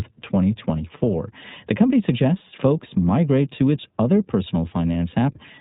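Throughout, the speech passes through the iLBC codec, which cuts everything above 4 kHz and codes each frame independently, leaving it narrowband, slightly rough and synthetic, consistent with its 15.2 kbps, 20 ms mode. From 2.38 to 2.42 s, just before "folks migrate to its", about one 20 ms frame is lost (lost iLBC frames), so the decoder repeats the last pitch cycle with noise, giving a brief buzzy held vowel before recovering immediately.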